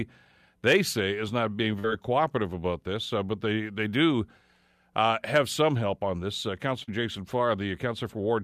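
Short concealed packet loss occurs twice, at 1.79 to 1.86 s after "say is not being" and at 6.84 to 6.89 s. About 40 ms went missing each time. The decoder extended the preceding sound across the gap, leaving a brief smear.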